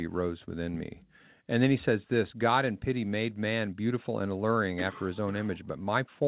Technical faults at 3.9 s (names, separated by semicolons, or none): none